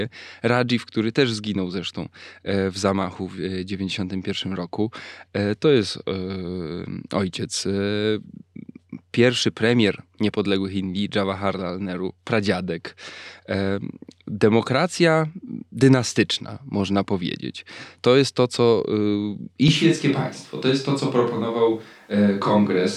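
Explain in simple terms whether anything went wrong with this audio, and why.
At about 19.68 s the speech suddenly turns roomy and hollow, with less bass, and stays that way to the end. The loudness barely changes and background noise stays faint. It's a switch to a distant microphone, likely because the close mic dropped out.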